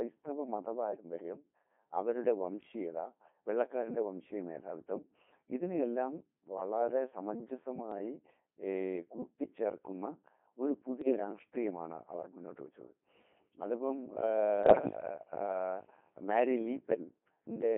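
Throughout, the speech passes through the Codec 2 vocoder, at what sounds like 2.4 kbit/s within a 200 Hz to 3.5 kHz band. It is rebuilt from pitch and spectral-envelope parameters, so it sounds heavily buzzy and robotic, not merely muffled. Bit errors on digital voice radio strike at 0.92 to 1.04 s, 11.02 to 11.19 s and 14.64 to 15.00 s. Flipped bits corrupt whole-frame parameters, producing sudden pitch and level jumps and warbling bleeps rather than the silent gaps of a dropout.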